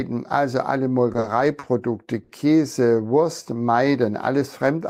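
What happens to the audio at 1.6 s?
A short stall from a late packet, 1.59–1.65 s: the jitter buffer ran dry, so about 40 ms of sound is stretched, nothing lost; spectrogram shows smeared, repeated frames.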